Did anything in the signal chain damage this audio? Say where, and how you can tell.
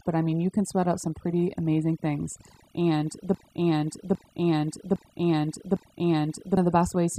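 Yes. Throughout the clip, overdone noise removal in the processing stage leaves the background near-silent with twinkling specks. The suppressor is pulling individual frequency bands down whenever they sit near its noise estimate, removing quiet speech components with them.

From 3.35 s to 6.57 s, a 0.81 s fragment repeats exactly four times back to back, a broken-record loop. The likely cause is a stall in the playback or streaming stage, which kept resending its last held fragment, so the audio for that span is lost.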